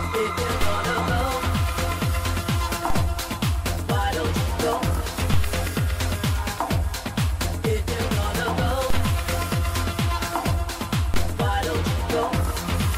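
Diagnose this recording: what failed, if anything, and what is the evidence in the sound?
The converter or analogue input suffered repeated DC steps: the zero line jumps by about -14 dBFS at 0.62 and 2.90 s, and about -12 dBFS at 5.34, 8.90 and 11.14 s. Each step bleeds away through a 2 Hz high-pass, sounding as a low thump beneath unchanged audio.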